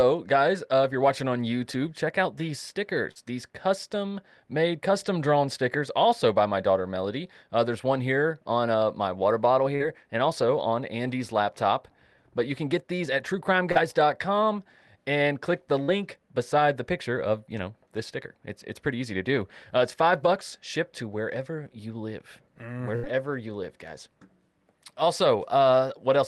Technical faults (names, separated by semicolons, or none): short concealed packet loss; burst of packet loss